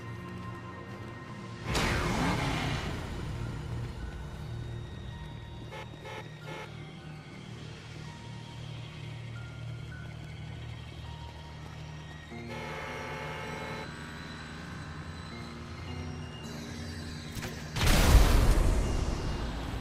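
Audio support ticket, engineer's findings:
Compressed frames skipped at 1.29, 5.07, 6.97, 11.69 and 17.09 s. Sound jumps ahead: roughly one frame at 1.29 and 5.07 s, about two at 11.69 and 17.09 s, about three at 6.97 s. Jump sizes fit a 20 ms frame. Probable component: decoder or container, with frames missing or rejected as damaged. Spectrogram: abrupt content shift at each join. Waveform: sudden envelope and phase discontinuity.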